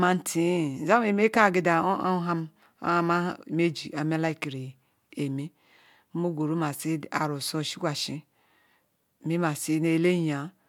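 Nothing here stands out as a technical fault; the recording just carries on steadily the whole way, with nothing breaking in or going astray.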